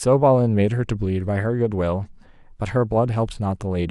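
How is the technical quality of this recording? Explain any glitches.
No glitches turn up anywhere in the speech recording, so there's nothing to explain.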